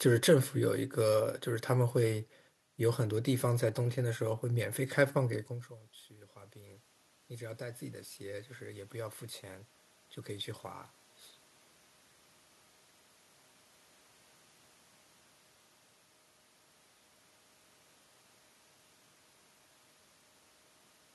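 Automatic gain rising, 6.09 to 8.99 s: after the speech drops about 21 dB, the control gradually adds about 7 dB, swelling voice and room noise together.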